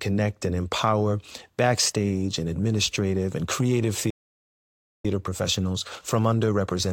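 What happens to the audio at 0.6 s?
Nothing goes wrong at 0.6 s; the speech carries on intact through that moment with no dropout, click, distortion or other fault.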